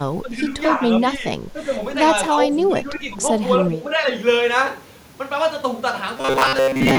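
Speech suppressed in double talk affects the clip five times: 0.22 to 0.51 s, 1.18 to 1.25 s, 1.53 to 1.72 s, 2.68 to 3.21 s and 3.68 to 4.07 s. The likely cause is the echo canceller failing to tell this side's talker apart from its own loudspeaker echo while the far side was playing, and pulling the level down. The voice sinks by about 10 dB in the first and fourth stretches and about 5 dB in the others.

Robotic sound from repeated short buffers takes over from 6.17 s to the end at 6.98 s. The likely cause is audio arriving too late, so the player keeps re-sending a short slice and skips most of the real signal. Roughly 70 percent of this tail is repeated material. The loops impose a steady 133 Hz buzz, which fits a slice of about 7.5 ms, and the speech becomes a hard, metallic drone.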